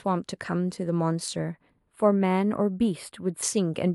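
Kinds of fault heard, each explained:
Channel delay (comb filtering): one channel lags the other by about two samples, a small fraction of a millisecond, and summing to mono cancels shared content at spaced frequencies. The first notch sits near 7 kHz, giving the speech a hollow, phasey sound from 1.39 to 3.43 s.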